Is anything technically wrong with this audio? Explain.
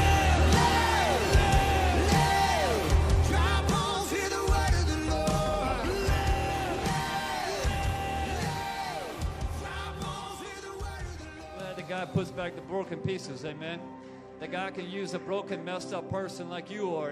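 No, nothing technically wrong can be heard in this audio. There is no fault to point to anywhere in the clip.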